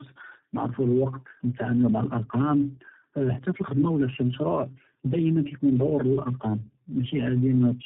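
Speech heard through tandem speech coding for its whole length. It sounds rougher, more muffled and more warbly than one narrowband codec would make it, with nothing above 3.8 kHz. That fits about three low-rate speech codecs in a row, each re-coding the previous one's damaged output.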